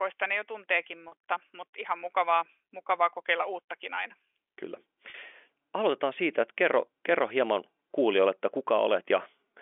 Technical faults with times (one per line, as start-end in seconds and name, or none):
1.08-1.12 packet loss with pitch repetition
5.10-5.14 packet loss with pitch repetition